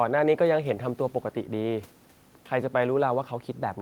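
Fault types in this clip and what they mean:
No faults found in the speech; nothing to list.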